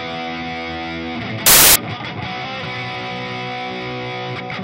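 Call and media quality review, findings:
Loud broadband noise burst, 1.46–1.76 s, samples built from the wrong bytes. Probable component: decoder or file reader misassembling sample bytes (offset, swapped order, wrong alignment), promoting low bits to high. Unlike clipping, the underlying waveform is buried under noise.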